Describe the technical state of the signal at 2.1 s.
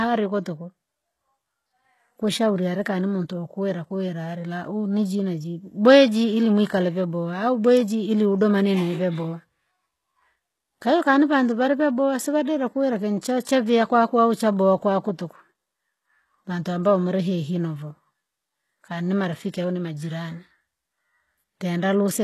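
At 2.1 s the speech sounds gritty and lispy on s sounds, with nothing above 12.3 kHz, likely HE-AAC compression throughout, its treble rebuilt from copied lower bands, which fits a bitrate near 16 kbps.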